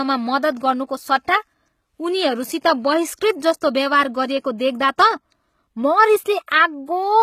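Throughout the speech, the treble has a synthetic, gritty quality and nothing is present above 14.9 kHz. This is likely HE-AAC compression, where the upper band is rebuilt by copying lower bands upward. The plainly audible damage fits a low bitrate near 20 kbps.

At 6.46 s there is pre-echo: a short hiss runs for about 16 ms ahead of a sharp onset, softening its attack. The codec's quantisation noise, sized for the loud transient, has spread back into the quiet moment just before it.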